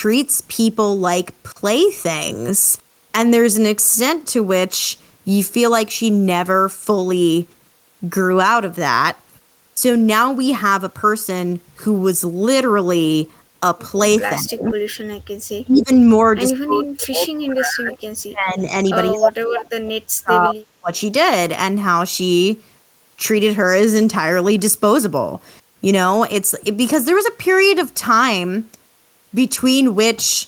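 Speech suppressed in double talk occurs at 14.41–14.77, 15.63–15.91, 16.52–17.97, 18.17–18.86 and 19.1–20.92 s. The voice dips by roughly 20 to 40 dB, likely because an echo canceller is turning down both its own talker and the loudspeaker echo at once. The waveform shows hollowed gaps and the spectrogram shows faded bands. Echo leak appears at 14.69–14.74 and 17.93–17.97 s as a faint repeat, about 20 dB down and 168 ms late, likely residual loudspeaker echo. On the spectrogram it shows as a weak, time-shifted copy.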